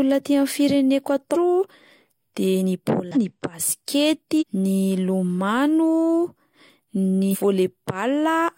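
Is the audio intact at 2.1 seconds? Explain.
Yes, the speech at 2.1 seconds is intact, with no dropout, click, distortion or other fault at that moment.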